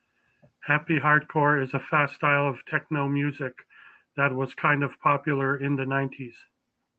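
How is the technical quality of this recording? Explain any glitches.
No glitches turn up anywhere in this speech recording; it has come through an ordinary call link whose codec stops the top end at around 8 kHz, which points to something like Opus running at a modest call bitrate.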